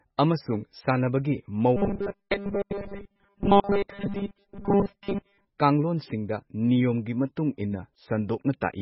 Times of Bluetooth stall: none

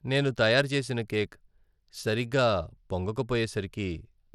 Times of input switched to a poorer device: none

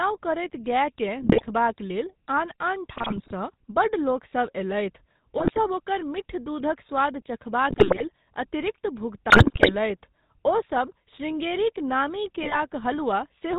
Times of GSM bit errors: 1.22-1.49, 2.97-3.32, 5.38-5.58, 7.70-8.03, 9.30-9.75, 12.42-12.58

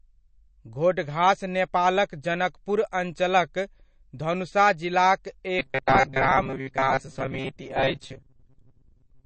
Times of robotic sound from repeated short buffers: 5.59-9.26

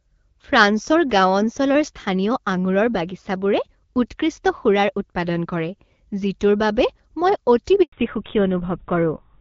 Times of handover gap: 7.82-7.92

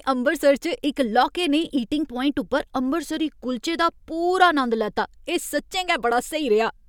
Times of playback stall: none

